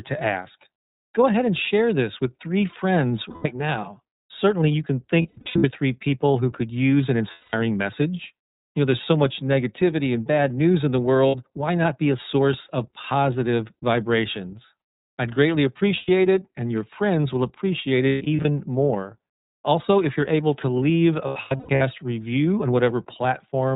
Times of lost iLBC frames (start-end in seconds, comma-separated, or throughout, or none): 3.29-3.46, 5.22-5.65, 7.31-7.54, 11.28-11.35, 15.96-16.09, 18.09-18.45, 21.26-21.82